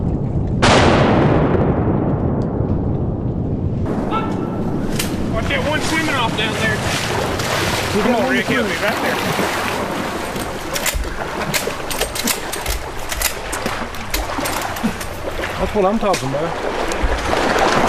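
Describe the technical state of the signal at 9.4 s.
At 9.4 s the signal is inside a stretch of crude rate conversion running from 7.99 s to 12.87 s. Samples appear to have been repeated by nearest-neighbour picking rather than filtered resampling, which fits a step from 44.1 kHz up to 48 kHz. The uneven repeat pattern adds inharmonic error products roughly 20 dB below the signal, heard as a gritty, buzzy fizz that rides on the louder and brighter parts of the sound.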